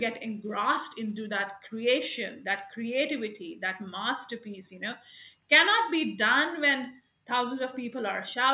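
No technical faults occur anywhere in the speech, and the sound carries nothing above 4 kHz, as expected of a narrowband call path.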